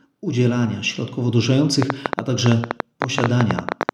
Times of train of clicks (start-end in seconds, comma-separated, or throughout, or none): 1.82-3.90